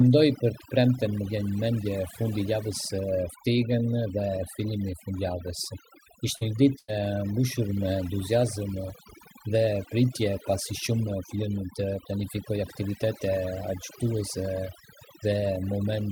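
Overdone noise removal runs throughout: bands near the noise estimate are cut hard, leaving near-silent gaps with twinkling specks, and quiet parts of the voice are cut with them. At 6.37 to 6.44 s, a short concealed packet loss fills about 44 ms by extending the preceding sound, heard as a brief smear where 40 ms is missing. At 6.41 to 6.43 s, a lost packet rebuilt from error correction plays a 20 ms low-bitrate copy that sounds rougher and noisier. From 6.79 to 6.93 s, a burst of packet loss drops 100 ms, replaced by about 91 ms of fading held sound before the audio resumes further on. A second 20 ms rebuilt packet at 6.88 to 6.90 s adds more roughness.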